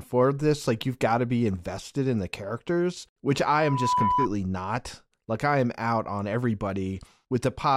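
Speech, with loudspeaker feedback squeal from 3.42 to 4.28 s. A 994 Hz tone swells over about half a second, ending a few decibels above the speech. The microphone is re-amplifying its own loudspeaker.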